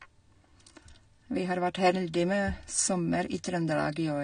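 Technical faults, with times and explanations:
Throughout, AAC compression: the speech sounds dull and smeared, with nothing above 9.7 kHz, which fits low-bitrate AAC-LC as the likely cause.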